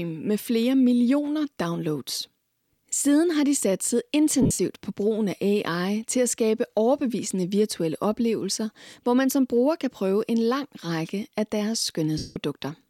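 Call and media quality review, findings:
Lost LE Audio frames, 4.42–4.59 s, between "har de satset" and "på brugen af": Bluetooth LE Audio link dropped frames across about 165 ms, longest gap about 70 ms. LC3 concealment replays the last spectrum with randomised phase, so speech smears into hiss.

Lost LE Audio frames, 12.18–12.36 s, after "af deres": 180 ms unbroken loss on the LE Audio link, which fits 7.5 ms LC3 frames. Concealment noise replaces speech and then fades steadily toward silence as the decoder attenuates the repeated spectrum.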